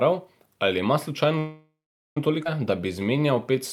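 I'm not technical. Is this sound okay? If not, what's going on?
No. From 1.38 to 2.17 s there's a call audio freeze, likely from delayed packets: the last sound stretches into a fading buzz, then about 0.43 s of silence, before speech resumes where it stopped. At 2.44 s a skip ahead drops roughly half a second of speech, so it jumps forward abruptly. From 2.80 to 3.57 s a jitter buffer slow-down repeats tiny slices of sound to rebuild its reserve, so speech runs at about 90% speed with drawn-out sounds.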